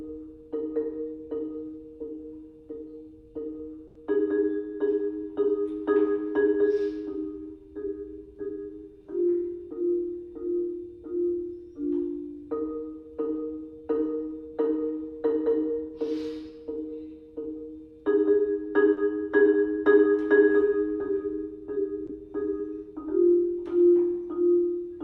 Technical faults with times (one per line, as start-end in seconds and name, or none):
3.87-3.97 short stall from a late packet
9.05-9.89 jitter buffer speed-up
18.93-18.99 short stall from a late packet